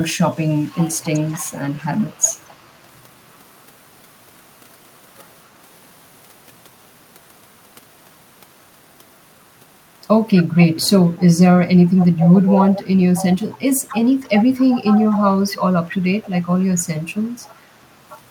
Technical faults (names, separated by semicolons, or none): echo leak